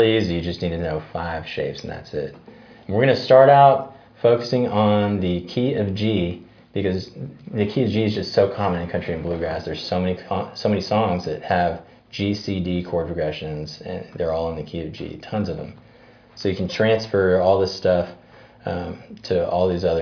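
Nothing here trips up the ear; there's no dropout, glitch or other technical hiccup anywhere in the audio.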